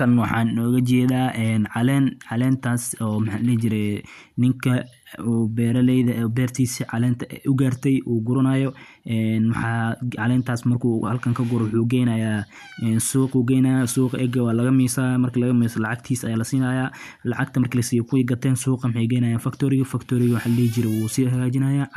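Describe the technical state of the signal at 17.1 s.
At 17.1 s the speech signal is intact, with no audible fault at that moment.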